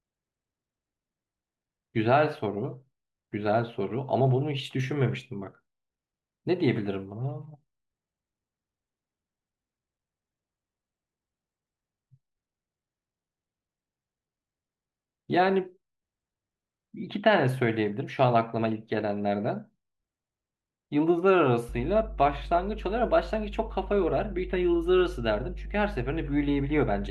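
A ground loop or nearby transformer has coupled the 50 Hz power line into this speech recording, producing mains hum from 21.69 s to the end: a steady low tone with a few low harmonics, sitting only roughly 10 dB below the speech.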